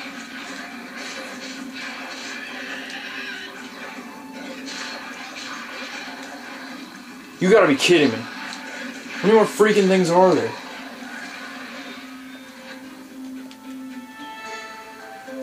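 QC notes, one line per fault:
Nothing to flag here, as there's no fault anywhere in the audio.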